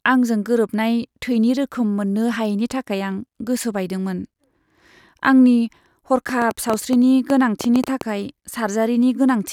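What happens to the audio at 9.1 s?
Nothing goes wrong at 9.1 s; the speech plays through that moment intact, with no dropout, click or distortion.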